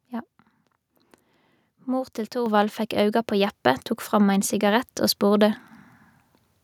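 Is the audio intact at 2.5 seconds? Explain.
No. At 2.46 s, a microphone volume step-up occurs: the input gain jumped by about 6 dB at once, so speech and background both get louder just before "fekk auga". The waveform envelope widens abruptly there, and the spectrogram brightens across all frequencies at once.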